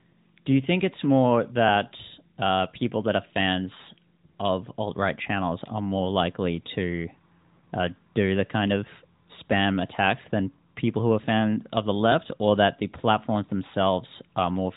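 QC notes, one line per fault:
No faults heard.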